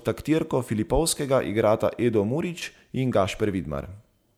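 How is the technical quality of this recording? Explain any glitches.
No audible glitches or faults.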